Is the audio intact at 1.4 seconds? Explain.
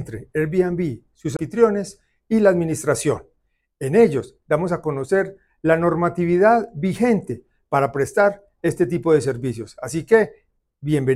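No. A CD skip at 1.37–1.39 s mutes for about 20 ms as the laser jumps to another turn of the spiral: a tick, a flat waveform gap, then a broadband vertical spectrogram line.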